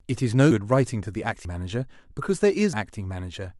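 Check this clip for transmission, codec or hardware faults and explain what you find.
Three jumps in the speech at 0.51, 1.45 and 2.73 s are likely a dropped buffer (overrun): capture fell behind, hardware overwrote unread audio, and the edges were spliced together. Each is a jump with the sound skipping ahead, about a tenth of a second lost at the first two and nearer a third at 2.73 s.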